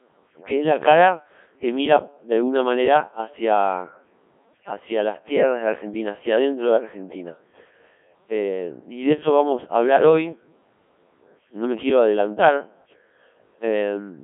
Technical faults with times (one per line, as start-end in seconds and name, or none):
0.00-14.23 Codec 2 vocoder